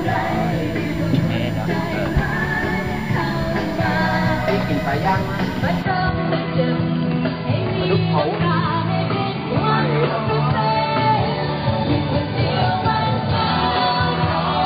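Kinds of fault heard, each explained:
USB whine: a steady, fixed-pitch tone at 1 kHz, strongest there, sitting roughly 25 dB below the sound for the whole clip. USB bus current drawn in 1 ms frames leaks through the power or ground path, putting that frame rate straight into the audio.
Input switched to a poorer device: from 5.82 s to the end, the sound goes duller and narrower, with nothing above 4.8 kHz and a new noise floor roughly 35 dB down. There is no gap at the change and no jump in level. The likely cause is the system swapping to a lesser microphone or headset mid-recording.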